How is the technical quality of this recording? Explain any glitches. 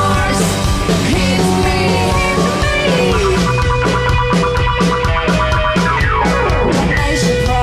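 Nothing in the recording stood out as a glitch or technical problem on listening.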